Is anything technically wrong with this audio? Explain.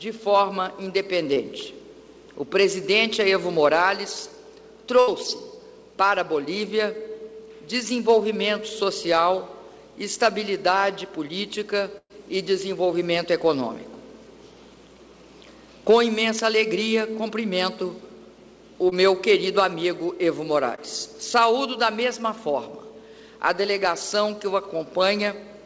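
Yes. The audio has short concealed packet losses and two bursts of packet loss. It was carried over a call path whose band stops at 8 kHz, which fits G.722 at 64 kbps.

Short concealed packet loss occurs at 1.34–1.38 s, 18.90–18.93 s and 20.75–20.79 s. Each time about 20 ms of audio failed to arrive in time, and the receiver extrapolated the preceding sound before crossfading back. The result is a brief smear or wobble.

Bursts of packet loss occur at 5.00–5.10 s, where about 80 ms is missing, and at 11.98–12.12 s, where about 120 ms is missing. The decoder prolonged the last sound while fading it, giving a held buzz or decaying hiss. In the second burst it fell to about 60 ms of silence before the audio resumed later, with the intervening material lost.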